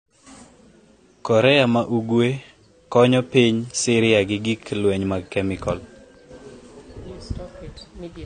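From start to finish the speech is dull and smeared, with nothing above 9 kHz and a fizzy warble on sibilants, likely AAC compression at around 32 kbps.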